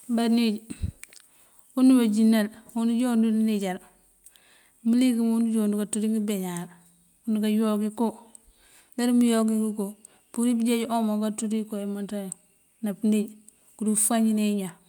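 Nothing goes wrong anywhere in this speech recording: no dropouts, glitches or other technical faults turn up at any point.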